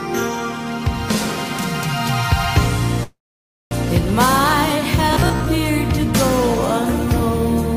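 From 3.03 to 3.73 s, packets were likely delayed and the jitter buffer ran dry, causing a call audio freeze. Most of it is silence, then the sound resumes where it stopped, with nothing lost.

From 5.13 to 5.46 s, audio likely arrived too seldom, so about half of it is repeated 15 ms chunks. The result is robotic sound from repeated short buffers, a rigid metallic buzz at 66.7 Hz.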